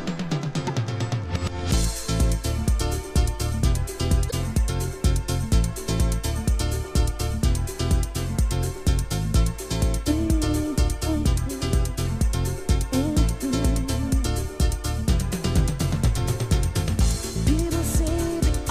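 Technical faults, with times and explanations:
0.64–0.70 s and 4.27–4.32 s, damaged data in a compressed stream: corrupted bytes make the decoder misread frames and lose sync, producing brief glitches.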